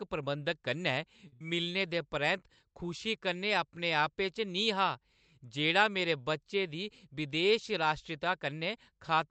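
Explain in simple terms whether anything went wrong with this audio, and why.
Two problems hit almost back to back near the start of this speech. From 1.27 to 1.34 s there is a short stall from a late packet: one piece of audio arrived behind schedule, so the receiver held the last sound for about 49 ms while it waited, then picked up exactly where it left off. Nothing is lost, but that moment is stretched and may carry a faint buzz.

Right after, from 1.34 to 1.42 s, comes a burst of packet loss. This time the audio never arrived in time to be played, and about 60 ms of speech is simply gone. The receiver covered the hole by continuing the last sound and letting it fade, so you hear a brief held buzz or hiss, and then the speech jumps ahead past the missing part.

Later, starting just after "जेह्ड़ा मेरे बच्चे दी", from 7.09 to 8.28 s, there is a jitter buffer speed-up. The receiver had built up more stored audio than it wanted, so it trimmed many tiny slices out to catch up, removing roughly a twentieth of a second in total. 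Speech in that stretch plays about 4 percent faster at the same pitch.

All of this came through a WebRTC call using the Opus codec, which limits the sound to frequencies below about 8 kHz.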